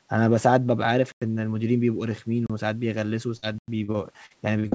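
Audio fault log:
1.12–1.22 s, 2.46–2.50 s, 3.58–3.68 s: block of digital silence. The output buffer likely went unfilled, so sound cuts to silence for 96, 32 and 96 ms. The 32 ms gap fits a 512-sample buffer.
3.37–4.75 s: repeated packet loss (robotic sound). Packets kept arriving late or not at all. Each hole is patched by extending the last sound, leaving choppy, robotic audio with pieces missing until the end.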